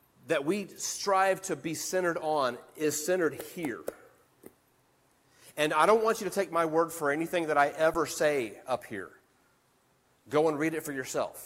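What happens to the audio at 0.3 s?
Nothing goes wrong at 0.3 s; the audio plays through that moment intact, with no dropout, click or distortion.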